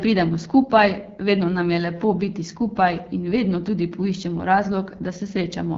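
Speech squeezed through the AMR wideband (HD Voice) codec the whole way through. It's rough and raspy, which points to one of its lowest rates, around 8.85 kbit/s. The vocal tract model can't keep up, and there's nothing above roughly 7.4 kHz.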